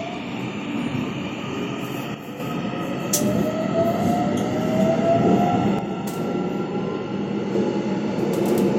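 At 2.14 to 2.40 s, and again from 5.79 s to the end, the sound abruptly drops by about 6 dB, likely because one channel drops out. Apart from that drop in level, the sound is otherwise unchanged.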